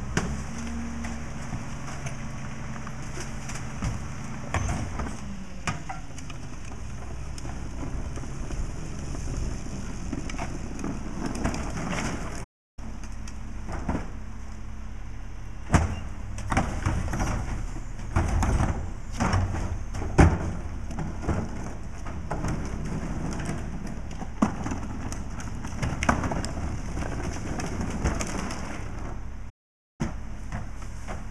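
At 12.43 s and again at 29.49 s, the sound halts mid-flow for about 0.33 s and then 0.50 s: a playback stall, likely from the player starving for data or its thread blocking. Unlike a brief dropout, each gap is a sustained silence.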